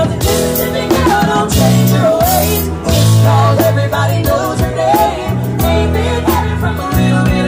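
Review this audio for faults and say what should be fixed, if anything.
Hard clipping runs through the whole clip: the signal is driven about 5 dB past what the stage can pass, so a few percent of samples hit the ceiling and are cut flat. Peaks crackle with added high harmonics, seen as flat-topped waveform peaks and vertical spectrogram streaks. To prevent it, lower the gain before the overloading stage or add a limiter ahead of it.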